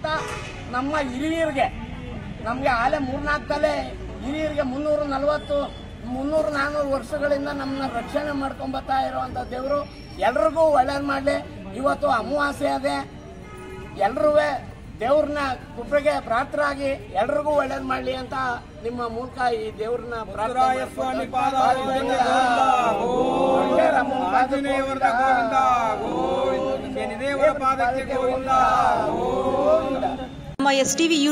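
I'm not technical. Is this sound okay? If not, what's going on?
No. For the first 6.0 seconds the sound is dull and watery, then suddenly turns clearer. That is an adaptive stream starting at a low bitrate. The player began on a lower-quality version, then switched up. Unlike a connection dropout, there is no gap or stutter at the change.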